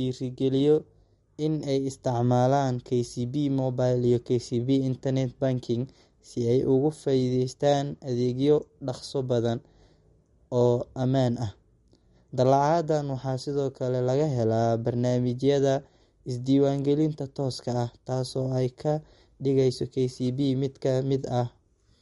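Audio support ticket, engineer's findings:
Watery, swirly speech throughout, with nothing above 11.2 kHz. Likely MP3 compression, fitting a bitrate near 52 kbps. The encoder cuts treble and drops weak frequency lines frame to frame.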